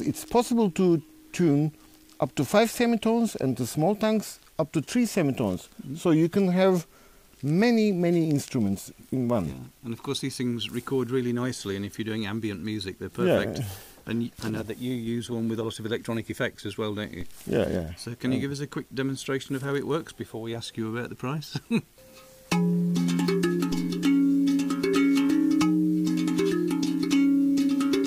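A DC step occurs at 17.21 s and again at 23.72 s: the waveform's zero line suddenly shifts by about -30 dBFS, then drifts back as a 2 Hz high-pass drains it away. Each jump is heard as a brief low thump beneath the continuing sound.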